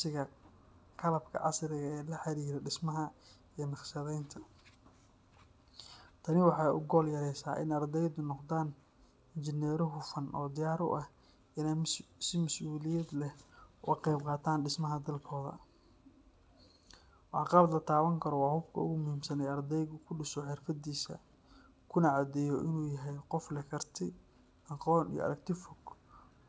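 A recording of speech with no technical fault to point to anywhere in it. It has been carried over a WebRTC call path, and the sound stops at 8 kHz, which fits a wideband call codec such as G.722.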